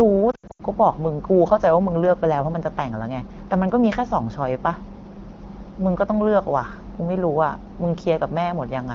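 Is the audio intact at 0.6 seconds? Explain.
No. Lost AMR speech frames run from 0.31 to 0.62 s, about 200 ms missing in bursts of up to 80 ms. The wideband decoder repeats the last good pitch and vocal tract settings at falling gain, so the sound warbles and dips toward silence.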